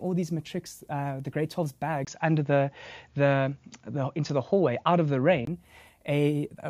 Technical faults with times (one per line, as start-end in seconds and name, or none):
2.05-5.47 input switched to a poorer device